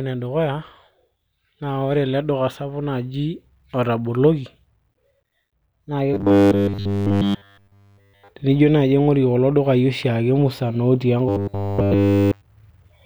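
Audio likely stopped arriving in time, so playback looped one short block, about 10 ms judging by the pitch, causing robotic sound from repeated short buffers at 6.14–8.30 s and 11.29–12.42 s: speech becomes a rigid 100 Hz metallic buzz throughout.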